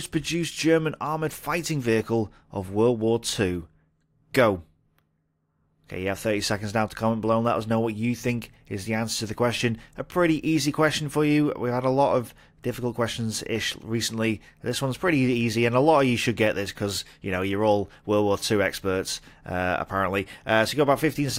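The signal holds steady throughout, with no audible faults anywhere in the sound.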